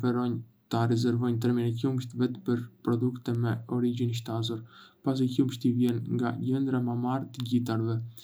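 At 3.35 s a short tick cuts through the speech. It is a bit error spike, peaking at about -32 dBFS and spread over a few samples. At 5.89 s a second, louder one follows, at about -14 dBFS, which fits a single corrupted sample. In each case one flipped bit threw the waveform off by a power of two, then it snapped back. Each sounds like a sharp, broadband click with no tie to the speech.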